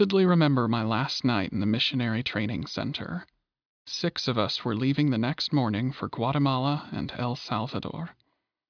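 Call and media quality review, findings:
No faults found in this speech recording.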